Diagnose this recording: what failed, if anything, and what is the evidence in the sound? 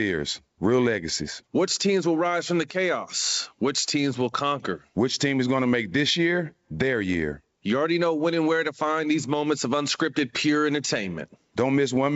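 Nothing stood out on listening; the speech has the character of ordinary G.722 wideband telephone coding, and no stage of the chain shows a failure to diagnose.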